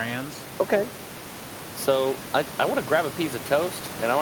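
No technical faults can be heard in this speech clip. Room noise sits in the background at about 15 dB below the speech, part of the recording itself.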